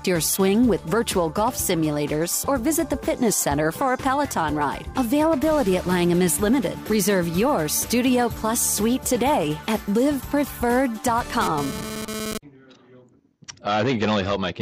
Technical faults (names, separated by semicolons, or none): GSM phone buzz